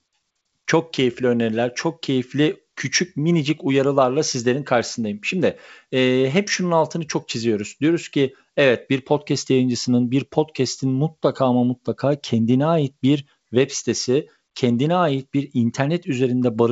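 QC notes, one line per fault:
No faults found; the speech sits on a G.722 call path with nothing above 8 kHz, consistent with that codec's band limit.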